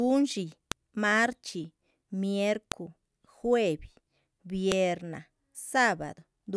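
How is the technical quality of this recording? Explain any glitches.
The recording is marred by three sharp, loud clicks at 0.72, 2.72 and 4.72 s, each a brief snap that cuts through the speech regardless of what is being said. This is a file header played as audio: the stream appears to be built from 2-second WAV pieces joined without stripping their headers, so each piece's leading header bytes are read as sample values, producing a click exactly every two seconds.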